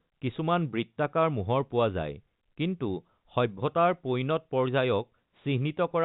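Nothing stood out on listening to this telephone-band speech recording.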